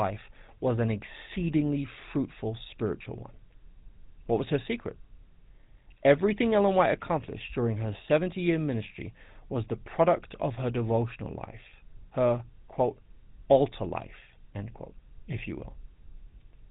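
Throughout the speech there is a plainly audible buzzy, gravelly roughness, and nothing above 4 kHz remains, so the sound is dull and narrow. This is GSM full-rate codec damage, consistent with 13 kbps coding: a vocal-tract model driven by sparse, regularly spaced pulses.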